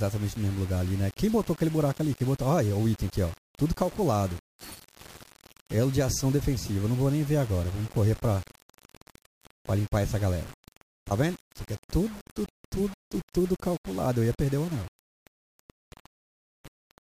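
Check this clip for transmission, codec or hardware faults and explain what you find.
There's one fault, and it runs through the whole clip: low bit depth without dither. The grainy, gritty texture tracks the sound itself, roughening quiet passages. It's likely about 6-bit rounding with no dither, leaving error only around 20 dB below the signal.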